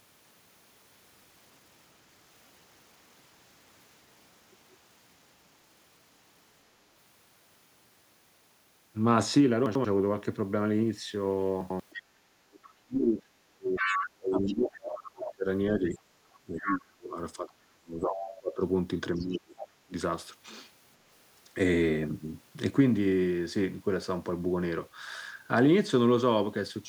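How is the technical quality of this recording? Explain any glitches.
The recording has clear technical problems. They cluster between 9.7 and 19.9 seconds. There are two reordering glitches, then a stretch of echo-canceller trouble.

Chunks out of order happen at 9.66 to 9.85 s and again at 11.61 to 11.80 s. In each, one short block of audio plays one slot late. The block lasts about 93 ms, which points to a fixed processing block of that size. No audio is lost. The sequence is scrambled, though, so each spot sounds briefly jumbled.

The other side's voice leaks through five times. The first is at 11.9 to 12.73 s, about 15 dB below the talker. The second is at 13.77 to 15.33 s and the third at 15.87 to 16.79 s, both only about 5 dB down. The fourth is at 18.15 to 18.35 s, about 10 dB down. The last is at 19.18 to 19.68 s, about 15 dB down. The likely cause is loudspeaker playback reaching the microphone that the echo canceller failed to remove.

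Background gated by the echo canceller occurs at 12.02 to 12.14 s. The room sound drops by up to about 10 dB for roughly a tenth of a second, then returns. The canceller clamped the microphone while the loudspeaker was active and released it shortly after. The effect is a brief hole in the ambience.

Speech suppressed in double talk runs from 12.74 to 18.62 s, with about four seconds affected in total. It appears again at 19.17 to 19.94 s, where about half a second is affected. The talker's speech dips, thins and cuts out in pieces. The deepest drops are around 30 dB. The likely cause is both sides speaking at once, so the canceller could not separate the talker from the echo and turned everything down.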